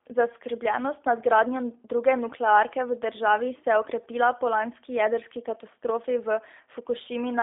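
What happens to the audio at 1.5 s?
At 1.5 s, as throughout, G.729 codec coding rebuilds speech from a filter and sparse pulses, sounding rough and synthetic. A spectrogram shows energy only between 300 Hz and 3.6 kHz.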